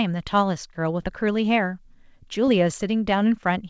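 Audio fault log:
1.02–1.06 s and 2.46–2.49 s, short concealed packet loss: at each point the speech briefly smears and wobbles. About 20 ms of the stream failed to arrive in time. The receiver bridged each gap by extending the preceding sound, repeating its pitch where voiced and shaping noise where not, then crossfading back into real audio. The audio above 8 kHz is missing throughout, which fits a G.722 call codec.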